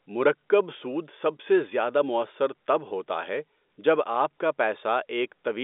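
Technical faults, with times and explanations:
No technical faults can be heard: the speech sits within an ordinary telephone band of roughly 250 Hz to 3.6 kHz with nothing above 3.7 kHz, which fits G.711 telephone coding working as designed, with at most a faint trace of the format's level-following quantisation noise.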